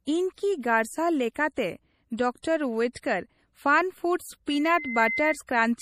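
Throughout the speech there is a muffled, swirly, metallic quality with a missing top end, the mark of heavy MP3 compression. The likely cause is low-bitrate audio saved at a high bitrate: the sound points to an MP3 around 40 kbit/s re-encoded at about 256 kbit/s, which cannot restore what was discarded.

From 4.51 to 5.38 s a single piercing tone at 2.1 kHz swells over about half a second until it is roughly as loud as the speech. This is a loudspeaker feedback squeal: the microphone picked up its own loudspeaker, and at that frequency the loop gain exceeded one, so the tone kept growing.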